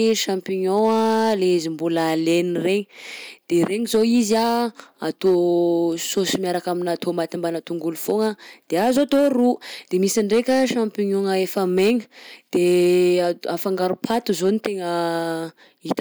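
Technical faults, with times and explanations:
Throughout: hard clipping. A stage in the chain was driven about 5 dB past the most it could pass, so the peaks were cut flat rather than followed. Only a small share of the samples, roughly one in fifty, reach that ceiling, so the damage sits on the loudest moments of the speech. There the squared-off tops add harmonics high in the spectrum, heard as a crackle on each peak.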